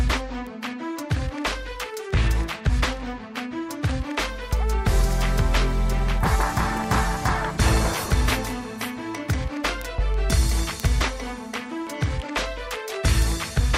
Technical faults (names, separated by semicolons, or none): word clock ticks